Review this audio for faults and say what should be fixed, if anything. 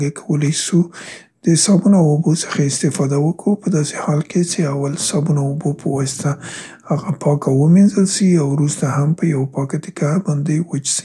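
No faults; nothing needs fixing.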